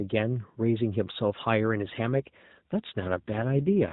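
An AMR rate drop begins at about 3.00 s and lasts to the end of the speech. The narrowband mobile codec falls from 12.2 to 5.9 kbps. Fewer bits go to describing the voice, so it turns rougher and more synthetic with no gap and no change in bandwidth.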